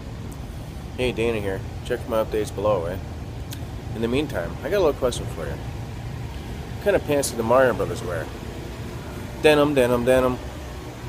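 No technical faults can be heard anywhere in the clip. At no point does anything interrupt or disturb the sound.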